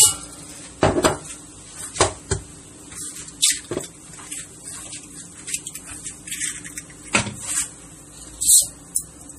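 All the way through, the treble stops dead at about 15.1 kHz, and there's a watery, swirly shimmer with smeared attacks. That's plainly audible and points to MP3 compression, likely at a low bitrate, around 40 kbps, where weak frequency lines keep dropping in and out between frames.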